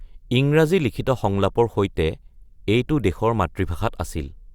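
No technical faults turn up anywhere in the speech recording.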